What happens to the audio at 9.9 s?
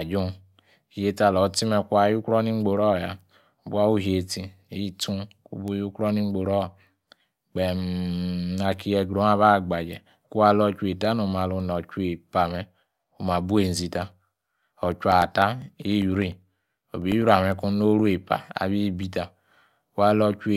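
Nothing goes wrong at 9.9 s: the speech carries on intact through that moment, with no dropout, click, distortion or other fault.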